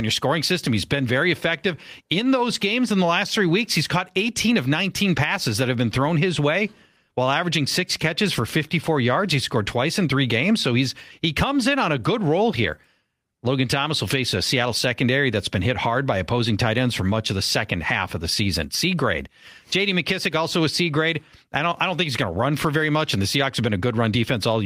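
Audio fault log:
Nothing stood out on listening to this speech recording.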